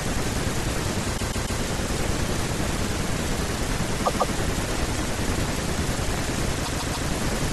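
At 1.17 s there's a stutter where a 144 ms chunk plays three extra times, through to about 1.60 s. That's repeated frames: a run of compressed frames, about six at this length, got written or sent more than once, so the decoder plays the same slice again. It adds 432 ms. The same thing happens at 4.05 to 4.33 s, with two extra plays adding 288 ms, and at 6.64 to 7.07 s, with three extra plays adding another 432 ms.

From 3.58 s to the end, around 7.49 s, there's a train of clicks, about 40 of them at roughly 10.7 per second, spaced unevenly and peaking a few dB above the speech. They're alike in shape and give a ticking, popping layer over everything. That's likely from interference from nearby gear or a faulty connection or power supply injecting pulses.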